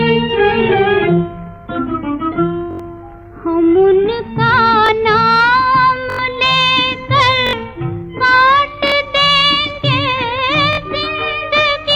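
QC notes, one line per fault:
2.71, 4.86, 6.10, 7.47, 8.88 and 10.73 s, repeated buffer: a 21 ms chunk, which fits a 1024-sample buffer, replays one to four times, making stutters that drop up to about a tenth of a second. The waveform shows identical tiled blocks, and the spectrogram shows vertical lines at each hard join.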